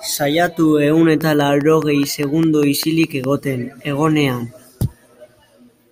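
A train of clicks runs from 1.21 to 3.25 s: around ten near-identical pulses at a steady 4.9 per second, standing well above the speech. The likely cause is interference from nearby equipment or a faulty connection or power supply, heard as regular ticking over the speech.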